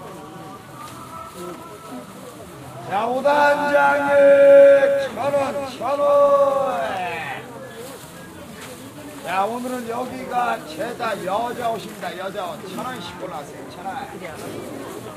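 From 3.32 s to 6.96 s, the sounds in the clip play twice. This is a doubled audio track. A second full-band copy trails the original by around 200 ms and sits roughly 5 dB quieter. It carries no decay or room colour, so it sounds like a clean repeat, not an echo. It cuts in and out abruptly at both ends. The likely cause is a second capture through a slower path, or an edit holding two copies out of step.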